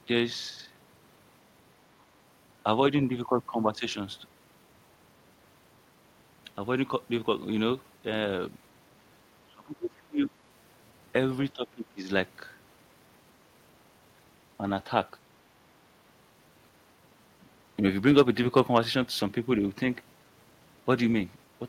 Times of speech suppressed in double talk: 9.48-10.31, 11.53-12.08

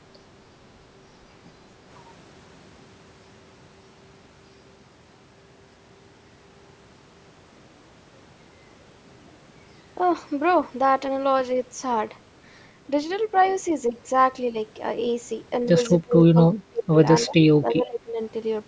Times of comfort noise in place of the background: none

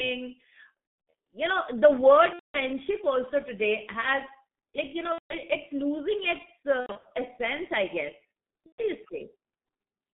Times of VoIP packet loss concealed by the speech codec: 0.91-1.13, 2.33-2.59, 5.12-5.35, 6.80-7.08, 8.66-8.82

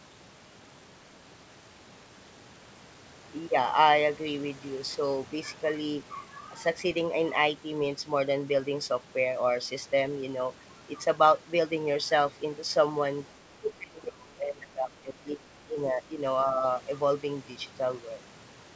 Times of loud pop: none

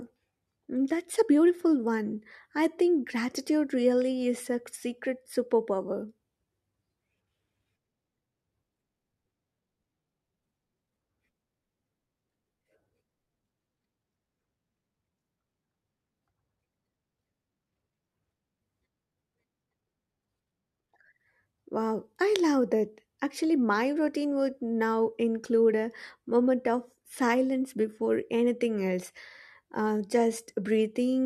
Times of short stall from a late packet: none

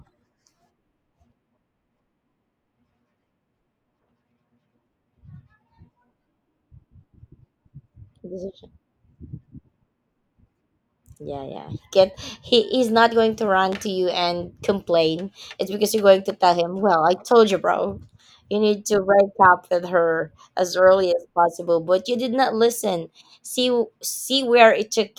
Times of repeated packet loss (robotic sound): none

